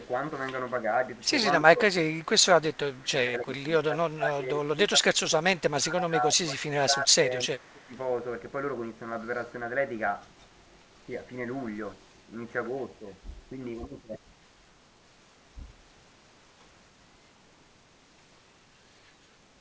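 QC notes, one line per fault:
0.00–0.06 s, echo leak: right at the start there's a very faint delayed copy of the speech, trailing by about 282 ms and sitting roughly 40 dB under the main level. It's most likely the far end running on a loudspeaker with its echo canceller letting a sliver of the returned signal slip through, so a ghost of the audio comes back.
1.65–1.87 s, 2.59–3.67 s, 3.89–5.38 s, 5.69–7.95 s, speech suppressed in double talk: the talker keeps getting ducked in chunks. The first dip is short and shallow, around 15 dB. The later three are longer and deeper, roughly 20 to 25 dB, and together pull down a good few seconds of speech. This is likely the echo canceller hearing both sides at once, failing to tell its own talker from the loudspeaker echo, and clamping down on everything, all inside a G.722 path whose band stops at 8 kHz.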